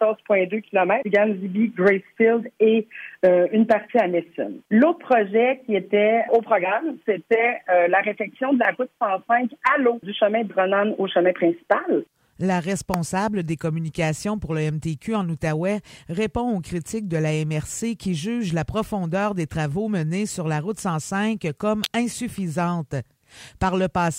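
At 12.94 s a sharp snap cuts across the audio, and a tight cluster of clicks follows from 21.84 to 21.86 s, both peaking around -5 dBFS. These are electrical switching spikes, likely arcs from a nearby switch or motor picked up on the line. Unlike a dropout or edit click, the underlying sound carries on uninterrupted beneath each burst.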